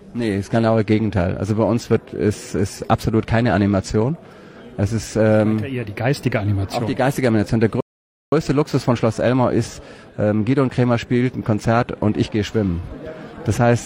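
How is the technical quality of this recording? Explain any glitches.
There is one glitch, a rebuffering stall. From 7.81 to 8.32 s the sound cuts to silence for about 0.52 s. The player exhausted its downloaded audio and waited for more. Unlike a dropout, playback resumes exactly where it halted, so nothing is missing and only time is added.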